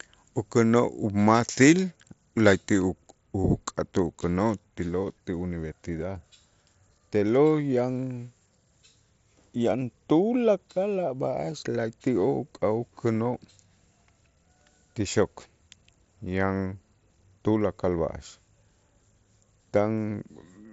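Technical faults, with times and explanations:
No technical faults to list, so there are no times or explanations to give.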